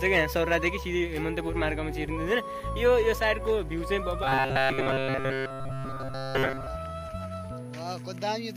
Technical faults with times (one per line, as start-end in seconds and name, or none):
4.24-6.67 robotic sound from repeated short buffers